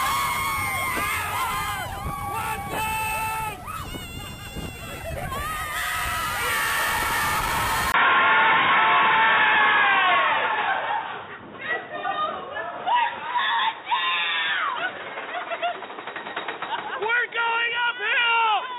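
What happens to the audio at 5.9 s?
Nothing goes wrong at 5.9 s; the audio plays through that moment intact, with no dropout, click, glitch or other fault.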